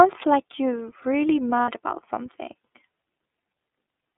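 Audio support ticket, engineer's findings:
iLBC codec, whole clip: narrowband speech, band roughly 250 Hz to 3.6 kHz, plainly rough and synthetic. Each frame's excitation is coded on its own, which fits iLBC's 30 ms mode at 13.33 kbps. Expect this grit throughout.

Lost iLBC frames, 1.62 to 1.68 s: a 60 ms stretch of held, faintly buzzy vowel. That fits two dropped 30 ms packets, with the decoder repeating the last pitch cycle plus noise. Recovery is immediate since frames stand alone.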